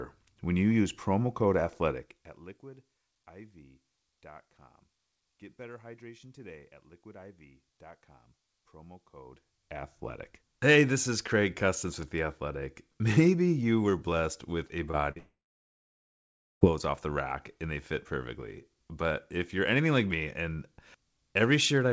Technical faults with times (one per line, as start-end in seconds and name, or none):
14.68-15.18 short concealed packet loss
15.18-16.63 long network dropout